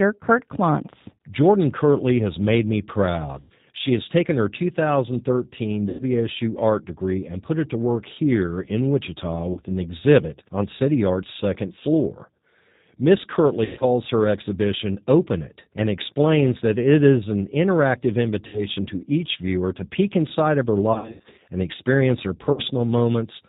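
A speech recording passed through the G.729 codec at 8 kbit/s (the sound fits the G.729A variant), which rebuilds the voice from a vocal-tract filter and sparse pulses and cuts everything above 4 kHz, leaving it dull, slightly rough and synthetic. VoIP packet loss concealed by the speech codec also occurs at 3.40–3.54 s after "has made me", 5.89–6.04 s before "art degree and put", 9.53–9.61 s, 13.65–13.85 s before "her exhibition", 18.47–18.61 s, 20.94–21.39 s (scattered gaps) and 22.52–22.61 s. The decoder stretches the last sound into a fading buzzy tone or coloured noise that stays weak briefly after packets return.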